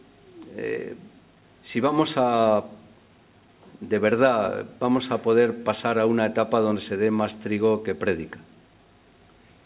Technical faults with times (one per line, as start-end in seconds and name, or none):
none